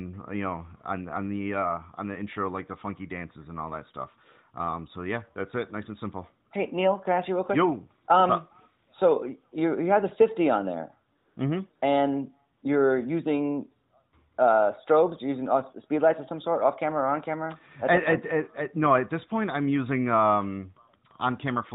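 At 11.18 to 11.36 s, 11.76 to 11.82 s and 12.58 to 12.62 s, AMR comfort noise appears. The phone judged the talker silent and stopped sending speech frames for 180, 60 and 40 ms. The receiver substituted a smooth synthetic hiss that switches abruptly in and out of the narrowband speech.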